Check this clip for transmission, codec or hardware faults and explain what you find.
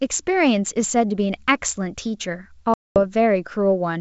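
One transmission fault stands out, packet loss on an ADPCM call. From 2.74 to 2.97 s the speech drops into a hard-edged silent gap about 220 ms long, which fits roughly ten lost packets. The decoder filled that time with silence. Its adaptive predictor and step size kept no track of the sender's during the gap. So when speech resumes, it comes back with brief, slight distortion. It settles within tens of milliseconds. The underlying G.722 wideband coding at 64 kbit/s shows little or no damage of its own.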